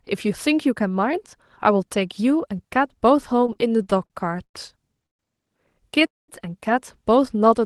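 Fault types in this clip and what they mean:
Repeated stalls (stutter): Packets kept arriving late or slower than playback consumed them, so the jitter buffer ran dry over and over, and the receiver stretched the last sound to cover each wait. Between 3.41 and 4.55 s the speech catches twelve times, adding about 257 ms in total, with the longest hold around 102 ms. Nearly a quarter of that stretch is filled sound, so it drags and stutters while nothing is actually lost.
Call audio freeze: Packets were likely held up in transit, leaving the jitter buffer empty until they arrived, and the receiver padded the wait before resuming exactly where it stopped. At 5.06 s a gap of about 129 ms opens, 120 ms of it silent; at 6.07 s a longer one of about 215 ms follows, 200 ms of it silent. Each pushes the speech later without dropping any of it.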